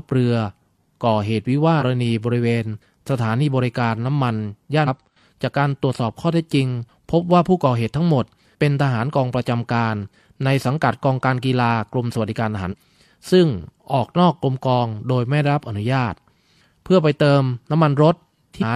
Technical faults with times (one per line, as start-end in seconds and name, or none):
1.77-1.83 compressed frames skipped
4.83-4.88 compressed frames skipped
12.68-12.75 compressed frames skipped
18.58-18.64 compressed frames skipped